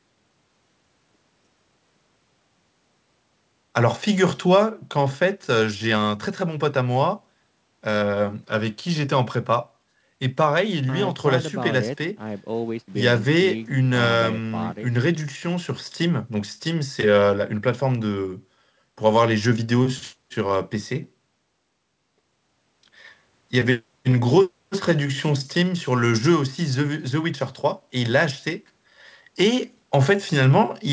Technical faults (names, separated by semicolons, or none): none